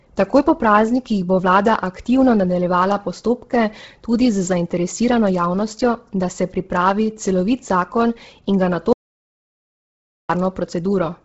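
Throughout, the speech sounds grainy and breathy, with nothing above 7.7 kHz and a smeared, noisy upper edge. This is Bluetooth LC3 compression, likely heavy: it fits a stream of about 16 kbps in 10 ms frames, which strips upper detail and fills it with noise.

From 8.93 to 10.30 s, the speech cuts into dead silence with no room tone for about 1.37 s, then resumes mid-flow. This is an audio dropout to silence, likely a lost input link while the recorder kept writing silence.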